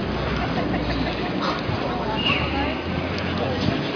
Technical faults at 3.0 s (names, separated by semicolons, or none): none